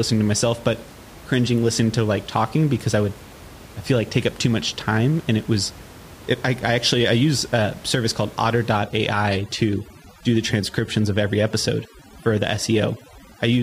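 From 8.79 s, after "use a service called", the background breaks into twinkling, warbling specks: overdone noise removal is shutting off bands near its noise estimate.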